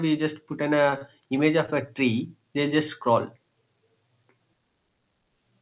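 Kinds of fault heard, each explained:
Repeated stalls (stutter): between 0.9 and 1.9 s the speech hitches five times, each pause filled by a short continuation of the preceding sound, the longest 29 ms and 91 ms in all, with nothing lost. Late packets kept running the jitter buffer empty.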